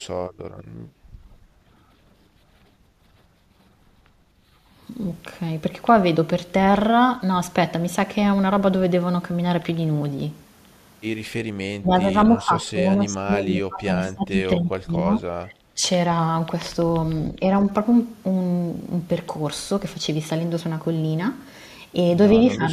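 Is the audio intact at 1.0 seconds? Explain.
No. Background gated by the echo canceller hits from 0.91 to 1.05 s: the canceller, reacting to loudspeaker playback, clamped the microphone, so the speech clip's room sound dips by about 9 dB for roughly 150 ms before recovering when the gate releases.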